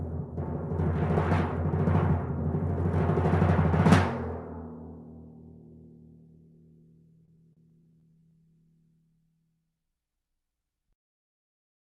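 From 7.25 s to 8.46 s there are repeated stalls (stutter). Packets reached the receiver late or more slowly than they were being played out, so its jitter buffer kept running dry. Each time, the receiver held the audio going by extending the last sound until fresh data arrived. That happens eleven times in this stretch, each gap no longer than 34 ms, filling about 177 ms in all, roughly 16% of the span. Nothing is lost, but the sound drags and catches in a stuttering rhythm.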